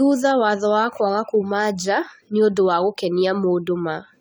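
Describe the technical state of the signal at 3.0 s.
At 3.0 s the speech has a swirly, hollow, smeared quality, with consonant onsets blurred rather than crisp, and nothing is present above 20 kHz. This is generation loss, and it runs through the whole clip. The likely cause is repeated lossy coding: the sound appears to have been decoded and re-encoded with AAC-LC around ten times, at a rate that points to about 96 kbit/s. Each pass quantises on a shifted frame grid, so noise and spectral gaps pile up.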